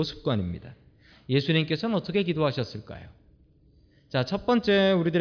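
No technical faults can be heard anywhere in the speech, and the signal stays intact and continuous throughout.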